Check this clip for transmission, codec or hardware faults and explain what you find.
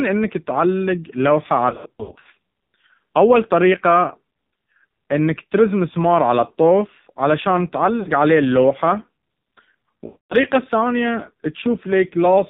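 Two faults are present: the whole clip passed through a low-rate mobile speech codec, and three stretches lost speech frames in transmission.

AMR narrowband mobile codec, throughout: the speech was squeezed through AMR-NB at a low rate, one that points to about 5.9 kbps. The codec keeps only a coarse vocal-tract model and a few excitation pulses per subframe, with nothing passing above 4 kHz. The damage is heavy: the speech sounds muffled, buzzy and synthetic, with a telephone-band dullness throughout.

Lost AMR speech frames, at three points. Frames failed their check, and the decoder filled each gap by repeating its last good pitch and vocal-tract settings at falling gain. From 1.70 to 2.28 s, right after "انك تعلق لوحة", losses totalling about 320 ms are scattered across 560 ms, the longest single run being 60 ms. This produces repeated dips and warbles. At 8.00 to 8.09 s, after "مسمار على الطوف علشان", a single 60 ms gap gives a short smeared dropout. 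From 10.06 to 10.36 s, 240 ms goes missing, and the sound stretches and fades before returning rough.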